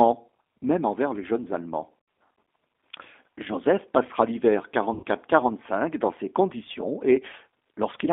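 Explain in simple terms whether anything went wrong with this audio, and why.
The whole clip has gone through the G.729 codec, a low-rate phone codec that rebuilds speech from a rough model of the voice. Everything is squeezed into about 250 Hz to 3.6 kHz, so it sounds thin, muffled and a bit rough and synthetic.

There are also two spots of VoIP packet loss concealed by the speech codec: about 2.00 to 2.08 s, and 4.94 to 5.03 s, right after "passera l'hiver". Each time, 80 to 90 ms of audio went missing, and the decoder filled the hole by stretching the last bit of sound. You hear it as a short buzzy or smeared patch that fades, and the speech stays weak or distorted for a moment afterwards.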